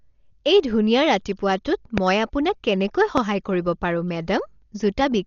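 Across the whole speech clip the sound is dull and rough, likely from heavy Dolby Digital compression near 40 kbps. Nothing reaches above 6.9 kHz on a spectrogram, and noise-filled bands flutter around voiced tones. At 1.98 to 2.00 s and again at 3.18 to 3.20 s, a loud pop jumps well above the speech, likely a voltage step or spike, and shows as a tall narrow waveform spike and a vertical line.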